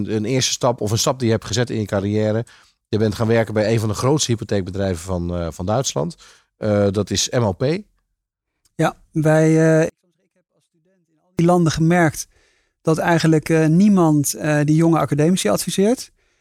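A 24-bit alignment error (too quiet) hits this speech clip from 9.89 s to 11.39 s. For that 1.49 s stretch, samples written as 24-bit integers sitting in the low bytes of 32-bit words are read back as full 32-bit integers. That pushes the level down by about 48 dB, so the passage is clean but nearly inaudible. The level falls away and returns abruptly at both edges rather than fading.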